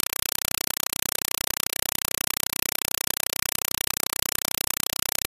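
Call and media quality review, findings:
Compressed stream played as audio, throughout: regular noise bursts in place of the sound, about 4 ms each, repeating 31.25 times a second with gaps between. Waveform shows a comb of dense blocks; spectrogram shows broadband vertical stripes. Undecoded AC-3 passthrough data, pattern fits 192 kbps.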